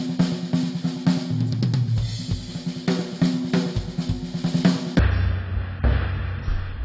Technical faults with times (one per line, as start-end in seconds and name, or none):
4.99-6.85 wrong sample rate